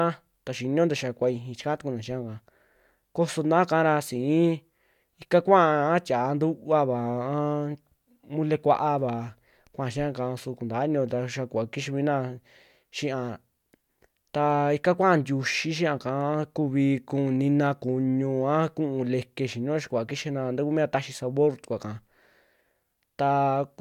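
No technical faults can be heard anywhere in the recording.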